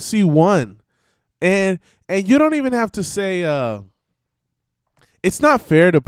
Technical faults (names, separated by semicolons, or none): none